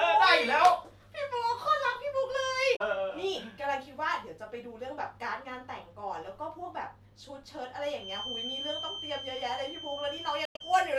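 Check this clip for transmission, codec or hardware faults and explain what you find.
Three faults are audible in this speech: two bursts of damaged data in a compressed stream and a feedback whistle.

At 2.73 to 2.81 s, and again at 10.45 to 10.61 s, damaged data in a compressed stream breaks the decoder's frame sync and forces it to hunt for the next valid header. Each break is heard as a brief glitch. The second one also stalls the audio by 48 ms.

From 7.93 s to the end, a loudspeaker-to-microphone path is likely held just short of runaway, producing a feedback whistle. It is a thin, steady 3.1 kHz tone, about 10 dB below the speech, swelling and fading slowly in level.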